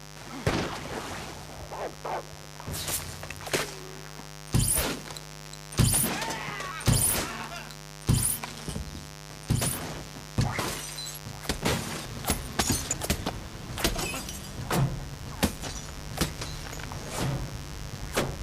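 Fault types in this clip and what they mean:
Mains buzz: Sharp switching spikes from the 50 Hz power supply are leaking into the audio path twice per mains cycle, adding harmonics that reach up to several kilohertz. The result is a steady, raspy buzz running through the whole clip, about 15 dB below the sound.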